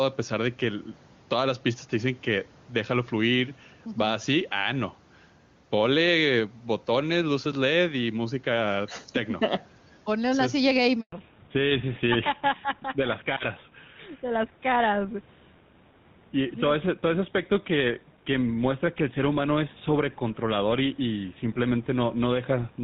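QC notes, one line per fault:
Throughout, gain pumping. The level swings by about 5 dB. Loud and soft parts sit close in level, so the sound feels squashed. The likely cause is input gain set far too high, with a fast limiter pulling it down on each peak.
11.00 to 11.12 s, handover gap. Just after "una silla" the speech dies away within a few tens of milliseconds. Then there is 120 ms of silence. This fits a network handover during which no speech frames arrived. Anything said in that moment is lost.
11.12 s to the end, fallback to narrowband. From here nothing above 4 kHz remains. The speech turns duller and rougher than the clear wideband first half. This points to the call dropping from HD Voice (AMR-WB) to an older narrowband codec such as GSM full rate.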